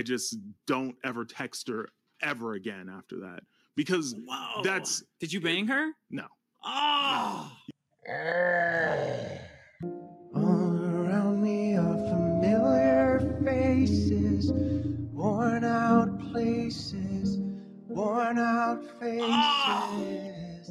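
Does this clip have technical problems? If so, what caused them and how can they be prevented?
Yes. A noise suppressor applied to music or sounds runs throughout, treating held tones and tails as noise and pumping the level by about 10 dB. Disable speech-oriented suppression for non-speech material.

A loudspeaker feedback squeal at 664 Hz runs from 10.89 to 13.14 s, growing over roughly two seconds to about 5 dB above the sound. The microphone re-amplifies its own speaker output. Lower monitor gain, reposition the microphone, or notch 664 Hz.

Sound is cut by the noise suppressor at 14.94–15.25, 16.09–16.37, 16.56–17.19, 17.51–18.02, 18.73–19.13 s and from 19.87 s to the end, dropping about 10 to 12 dB as sustained passages are pulled down. Bypass the suppressor or reduce its strength.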